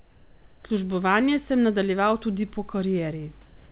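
From 0 to 0.64 s and from 3.46 s to the end, the background becomes a steady, featureless hiss, about 2 dB quieter and then about 1 dB louder, likely comfort noise in place of the background during paused transmission. Unlike a gate or dropout, the gaps never fall silent.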